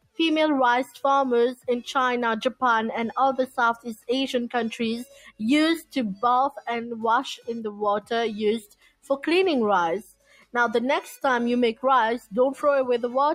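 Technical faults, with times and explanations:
Throughout: noise suppressor applied to music or sounds. A speech-oriented suppressor keeps mistaking sustained and ambient content for noise, so gain swings by around 10 dB. Onsets pass while held portions and tails sink, giving an audible pumping, thinning character.
0.00–0.19 s, 0.87–1.02 s, 3.77–4.09 s, 5.05–5.40 s, 8.61–9.10 s, 10.03–10.54 s: sound cut by the noise suppressor. In each window the suppressor classed the material as noise and pulled it down hard, by about 11 to 21 dB at the deepest. Each dip lasts from a fraction of a second to roughly half a second, so steady or decaying sound drops away abruptly.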